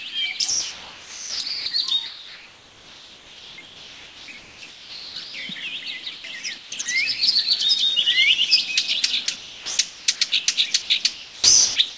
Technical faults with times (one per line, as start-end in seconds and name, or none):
0.50-1.66 sound chopped by the voice detector
2.06-5.34 sound chopped by the voice detector
6.04-6.06 sound dropped by the voice detector
6.04-6.24 comfort noise in place of the background
6.58-6.86 comfort noise in place of the background
6.82-6.86 sound dropped by the voice detector
9.26-10.48 sound chopped by the voice detector
10.82-11.97 sound chopped by the voice detector